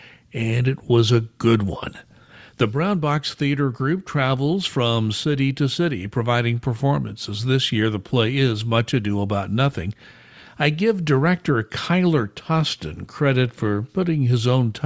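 No faults detected anywhere in the speech; nothing to flag.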